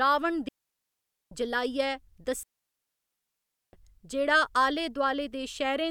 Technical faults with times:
0.48-1.31 digital wireless dropout
2.43-3.73 digital wireless dropout

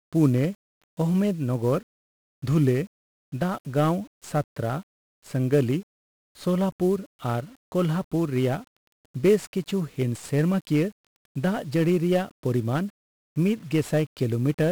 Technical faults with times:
0.00-14.71 1-bit DFPWM compression

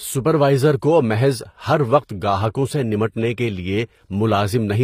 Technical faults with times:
0.00-4.84 HE-AAC compression

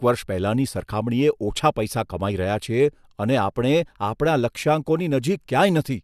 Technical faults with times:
none

